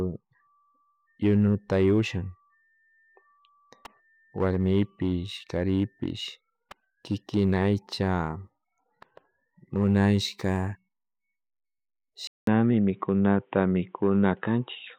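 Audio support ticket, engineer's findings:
Abrupt dull, boxy tone from 12.27 s to the end; 0.2 s silence at the switch. Nothing above 3.8 kHz afterwards. Level shifts about 5 dB, faint new noise floor. Likely input switched to a poorer device with a narrower band.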